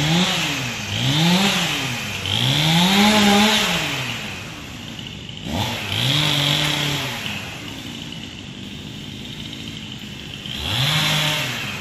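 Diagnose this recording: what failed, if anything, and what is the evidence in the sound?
Computer activity noise in the analogue wiring, present throughout. A buzz pulses at roughly 500 Hz, well below the sound. Load changes of the processor, graphics card or mouse disturb the shared ground.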